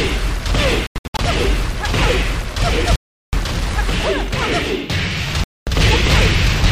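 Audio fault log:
0.87–1.19 s, 2.96–3.33 s, 5.44–5.67 s: Bluetooth dropout. Sound cuts to silence and resumes further on, as if playback continued. The first gap is fragmented (255 ms lost, bursts up to 93 ms); the others are solid 372 ms and 232 ms holes, likely from late packets being discarded.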